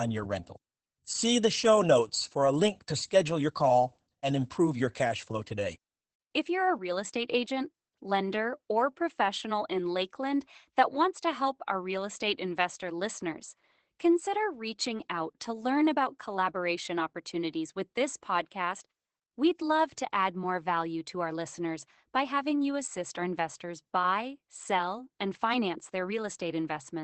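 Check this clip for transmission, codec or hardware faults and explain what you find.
One codec fault runs through the whole speech clip: Opus voice compression. The speech is coded by Opus's SILK linear-prediction mode, confined to a wideband channel topping out near 8 kHz, with coarse excitation coding that fits a bitrate near 12 kbps. The result is plainly audible: muffled, somewhat hoarse speech with a faintly robotic edge.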